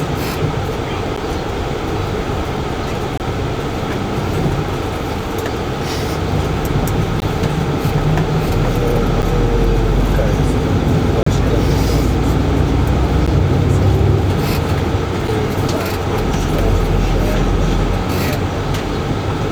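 At 1.16 s, 3.18 to 3.20 s, 5.20 s, 7.20 s, 9.22 s, 11.23 to 11.27 s, 13.26 s and 15.28 s the sound drops out in short, hard-edged holes, spaced almost exactly 2 s apart. These are gaps between stream segments: timestamps on consecutive 2-second segments leave a small space, and playback fills it with silence. Each hole adds time rather than losing audio. The gaps range from about 4 ms to 34.5 ms, the longest at 11.23 s, and sound like brief, hard-edged interruptions of silence.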